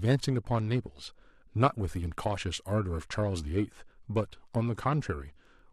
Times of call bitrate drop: none

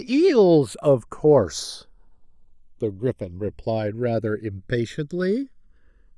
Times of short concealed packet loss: none

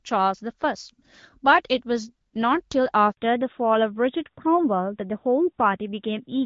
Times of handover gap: 3.11-3.17

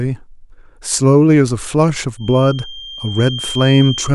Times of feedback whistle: 2.15-4.14

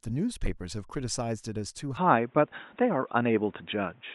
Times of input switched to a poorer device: 1.97-4.14

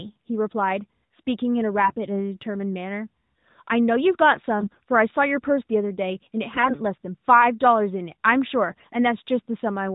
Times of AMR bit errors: 1.84-1.94, 4.60-4.80, 6.54-6.75, 8.70-8.86

